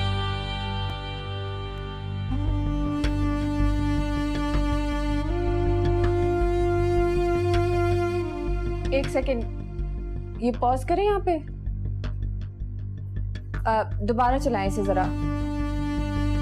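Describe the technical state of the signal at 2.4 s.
At 2.4 s the signal is intact, with no dropout, clipping, distortion or other fault audible at that moment.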